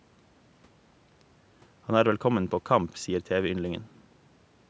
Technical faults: none

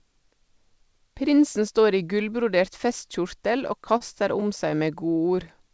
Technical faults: repeated stalls (stutter)

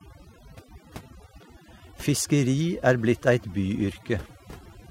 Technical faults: overdone noise removal

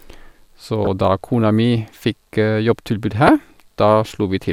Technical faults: damaged data in a compressed stream

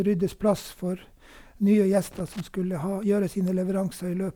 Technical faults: loose connector crackle

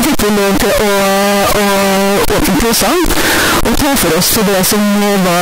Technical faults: float read as integer

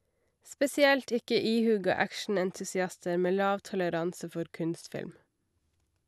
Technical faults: none

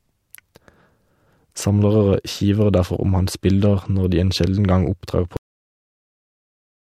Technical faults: cut-off end

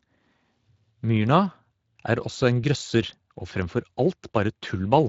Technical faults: Speex codec

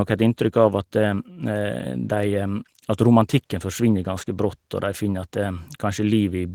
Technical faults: Opus voice compression

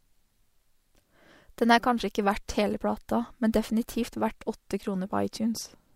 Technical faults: none

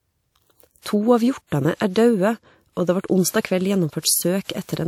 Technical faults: pre-echo

